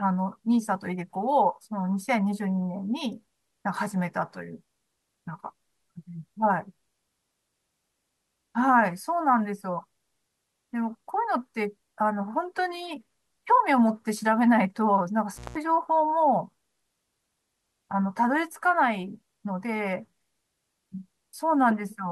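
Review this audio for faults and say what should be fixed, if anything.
An intermittent contact drops the speech from 15.34 to 15.56 s. A loose plug or cable opens for 178 ms, with crackle at both edges. Reseat or replace the suspect cable and secure its connectors before recording.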